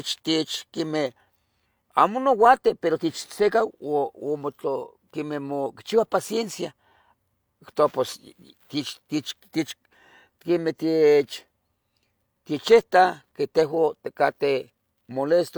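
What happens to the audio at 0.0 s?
At 0.0 s the audio is clean, with no dropout, click, distortion or other technical fault.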